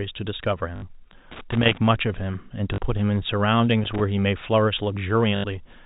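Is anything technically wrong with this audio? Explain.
Yes, the speech has two kinds of fault, packet loss with the last packet repeated and loose connector crackle, heard over a telephone-band line that cuts off above 4 kHz, as G.711 coding does.

Packet loss with last packet repeated, at 0.76 to 0.82 s, 2.74 to 2.78 s and 5.36 to 5.44 s: audio went missing for 60, 40 and 80 ms, and the receiver looped the last good chunk until fresh audio arrived. The loops ignore the pitch cycle, so the run buzzes at a steady rate, which fits 20 ms packets. It sounds like a brief robotic stutter.

Loose connector crackle, from 1.31 to 1.78 s and 3.84 to 4.05 s: a poor contact in the signal path kept making and breaking, chopping the audio into fragments. Each stretch comes through as an irregular burst of scratchy crackle over the speech.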